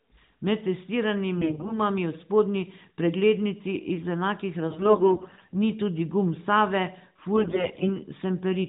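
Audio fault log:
1.38–1.79 s, 4.68–5.60 s and 7.36–7.96 s: AMR bit errors. The speech turns hoarse, scratchy and gargly in three bursts. The first ends just before "v spodnji preglednici iz". The second follows "spodnji preglednici iz enakih" and ends before "ni tudi gum". Bits in the weakly protected parts of the narrowband mobile codec frames arrived flipped. The decoder then placed its excitation pulses wrongly and used skewed gain and spectral values. Pitch and loudness roughly hold. The first burst is the roughest.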